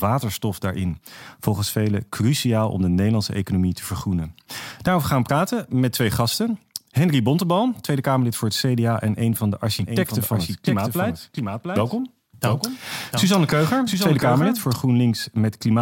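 A speech clip with a doubled audio track from 9.79 s to 14.73 s, starting just after "en een van de". A second, full-band copy of the speech runs around 0.7 s behind the original. It sits roughly 5 dB quieter. It has no reverb tail or room colour, so it is not an echo. It appears and vanishes abruptly. The likely cause is the same signal captured again through a slower path, or an edit leaving two offset copies.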